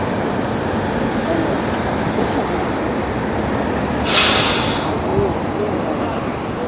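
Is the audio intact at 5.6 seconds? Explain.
Yes, the audio is intact at 5.6 seconds, with no dropout, click, distortion or other fault audible at that moment.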